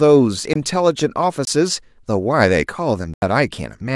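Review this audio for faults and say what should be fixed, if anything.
Three blocks of digital silence interrupt the speech, at 0.53 to 0.56 s, 1.45 to 1.47 s and 3.14 to 3.22 s. Each time the signal drops straight to zero and returns with no fade. The first two holes last about 21 ms each, which fits a missed 512-sample buffer. The third lasts about 85 ms, consistent with four buffers in a row, and is heard as a distinct gap. Prevent these by enlarging the output buffer or raising the audio thread's priority so every buffer is filled on time.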